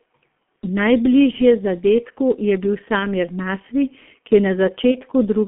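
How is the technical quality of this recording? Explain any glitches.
Quality is pretty rough: the whole thing has gone through a low-bitrate telephone codec, and there are three short dropouts where lost packets got patched over.

The G.723.1 codec damage runs start to finish. At around 6.3 kbit/s with 30 ms frames, the speech is squeezed into a narrow 200 Hz to 3.4 kHz telephone band, so everything sounds muffled and a bit hoarse. The codec's voice model updates slowly, which smears consonants together, and here the damage is heavy.

The packet loss concealment shows up at 1.31 to 1.37 s, at 2.99 to 3.06 s right after "je bil", and at 4.91 to 4.97 s just after "ki je". Each gap fits one 30 ms frame going missing. The decoder fills it by extrapolating from its last pitch and filter state while turning the gain down, so you hear a brief buzzy or tonal smear that fades. Because each frame depends on the previous one, the speech stays weak or distorted for a moment after each gap.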